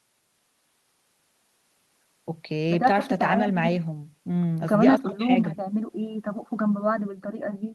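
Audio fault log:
There is no fault.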